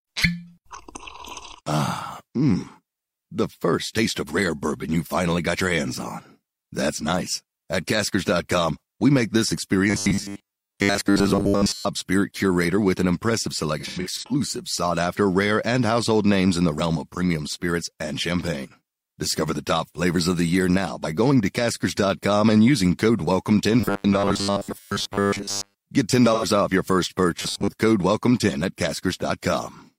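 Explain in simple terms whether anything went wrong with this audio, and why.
Robotic sound from repeated short buffers appears at 9.9 to 11.86 s (after "we make this"), 23.80 to 25.76 s, and 27.38 to 27.69 s (after "off your first"). The speech turns into a stiff, metallic buzz at 100 Hz. The likely cause is fresh audio arriving too slowly, so the player keeps replaying the last 10 ms of sound. About two-thirds of the audio in the first two stretches is these repeats, and about half in the last.

AAC frame loss with concealment occurs at 13.79 to 14.32 s (after "curator with an impressive") and at 26.33 to 26.45 s. Pieces of the compressed stream went missing, and the decoder filled the gaps with guesses based on the last good sound. The first stretch loses about a quarter second, scattered over half a second, with no single gap much longer than a tenth of a second. The second loses 85 ms. 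Both sound like brief smeared, noisy patches.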